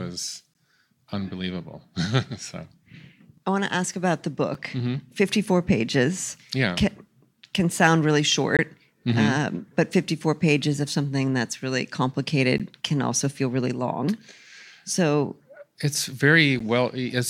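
It's a speech clip with a gap between stream segments recurring every 4 seconds: short hard-edged dropouts to silence at 0.54 s, 4.54 s, 8.57–8.59 s, 12.58 s and 16.59 s. Each hole lasts between about 6 and 20 ms. The segment timestamps don't quite butt up against each other, so the player pads the gap with silence. Nothing's actually missing, just extra dead air at each boundary.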